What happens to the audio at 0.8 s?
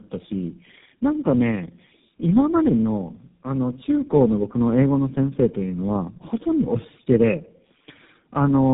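At 0.8 s the speech is inside a tandem speech coding fault spanning the whole clip. It passed through G.729A, iLBC and GSM full rate in turn, each re-coding the last one's losses, so it sounds rough, muffled and warbly. A spectrogram shows smeared harmonics under a hard ceiling near 3.8 kHz.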